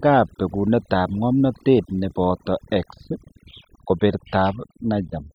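Overdone noise removal runs through the whole speech clip. A noise reduction stage pushed far too hard is cutting individual frequency bands deep, or muting them outright, whenever their level sits close to its noise estimate. Softer parts of the voice fall below that line and are removed along with the noise. The result is a near-silent background sprinkled with twinkling specks. A spectrogram shows dark, empty gaps flecked with isolated bright dots, and the speech harmonics are ragged and hollowed out.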